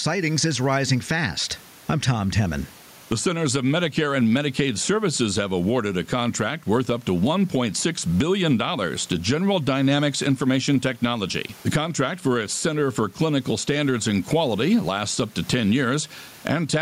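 Gain pumping runs through the whole speech clip, with the room noise sitting about 36 dB below the voice and a gain swing of around 15 dB; loud and soft parts end up closer in level and the sound is squashed. This is likely microphone gain set far too high with a fast limiter clamping each loud sound. On a waveform the peaks look flattened.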